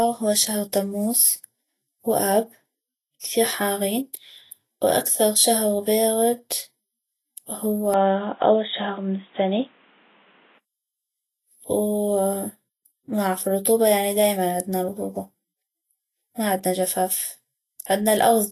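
Vorbis compression, likely, runs through the whole speech recording: treble is cut above 14.2 kHz and coarsely quantised into grainy hiss, which fits a low bitrate near 26 kbps. An input switch to a poorer device, likely, from 7.94 to 10.58 s narrows the band to nothing above 3.8 kHz with faint new background noise, without a gap.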